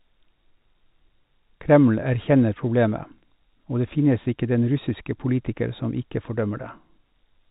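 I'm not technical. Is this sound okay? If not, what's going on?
Yes, this sound is okay, with nothing going wrong in it.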